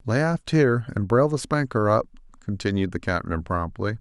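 A short bit of speech, and nothing technically wrong turns up anywhere in it, so there's nothing to time or trace back to a cause.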